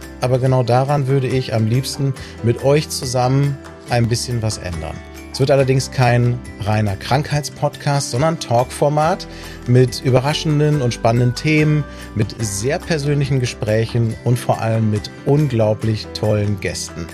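From 0.98 s to 16.31 s, a tick recurs every 1.02 s. These are periodic USB or driver dropouts. Something stalls the audio path at a fixed interval. Each time, about a millisecond of audio is skipped. The join clicks audibly.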